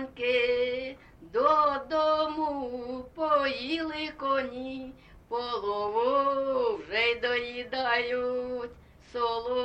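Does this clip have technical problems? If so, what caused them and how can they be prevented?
No, no technical faults heard.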